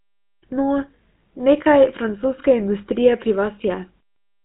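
Throughout, the speech has a buzzy, gravelly roughness with nothing above about 3.8 kHz, the mark of the GSM full-rate codec, which fits 13 kbps coding.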